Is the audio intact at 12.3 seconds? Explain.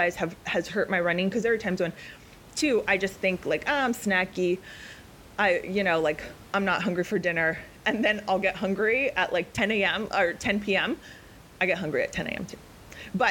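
Yes, the audio is intact at 12.3 seconds, with only the room's own background noise sitting about 23 dB below the speech.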